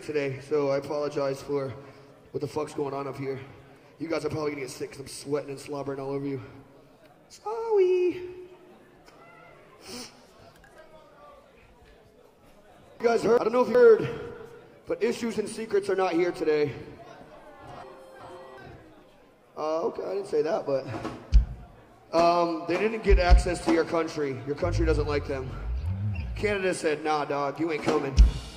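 A brief jumbled stretch occurs at 13.00–13.75 s and again at 17.83–18.58 s. These are chunks out of order: in each, one 0.37 s block arrived a chunk late and played after the block that should follow it.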